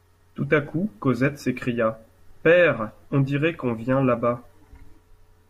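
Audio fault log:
Nothing to log here, since no faults turn up anywhere in this speech clip.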